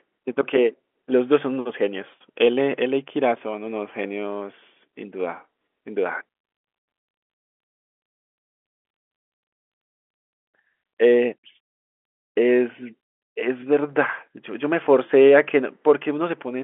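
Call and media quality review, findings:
No faults found: the speech sits in an ordinary telephone band of about 250 Hz to 3.4 kHz, consistent with G.711 mu-law coding at 64 kbps, with at most a faint level-following quantisation noise beneath it.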